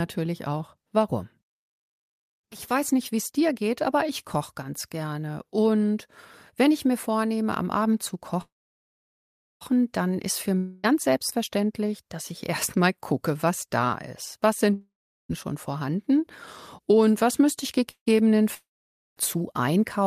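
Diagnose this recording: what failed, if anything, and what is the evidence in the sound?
Two call audio freezes sit in the network path. At 8.41 to 9.63 s the last sound decays into a buzz or hiss, then about 1.1 s of near silence. At 17.91 to 18.08 s a shorter fade follows. The jitter buffer likely ran dry on delayed packets. Speech resumes where it stopped, with nothing lost.

Three long network dropouts also point to the network. At 10.58 to 10.85 s a fading buzz or hiss covers about 0.26 s of missing speech. At 14.73 to 15.31 s about 0.7 s is gone, including 0.4 s of silence. At 18.54 to 19.18 s about 0.64 s is lost, with 0.52 s silent. Packets likely never arrived, so speech returns further on.

A jitter buffer speed-up follows from 15.54 to 16.97 s. Speech runs about 2% fast at unchanged pitch. Roughly 40 ms of pitch-period pieces were cut to drain excess buffered audio.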